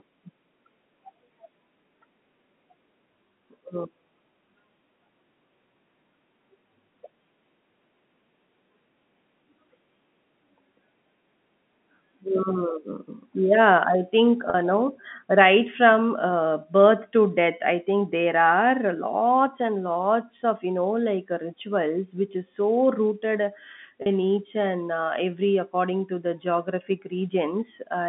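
At 14.5 s and again at 24.02 s, packet loss with pitch repetition occurs. Each time about 40 ms of audio went missing, which fits two 20 ms packets. The receiver filled the hole by looping the last pitch period. Both gaps are short, so the sound briefly hangs on a held, slightly buzzy tone before speech resumes at "no right from uh" and later "each and uh". The G.711 telephone band carries both dropouts.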